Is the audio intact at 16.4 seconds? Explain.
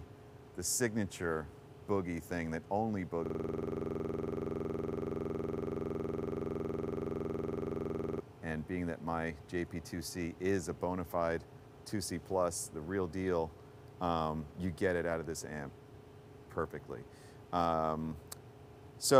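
Yes, at 16.4 seconds the audio plays through intact, with no dropout, click, distortion or other fault at that moment.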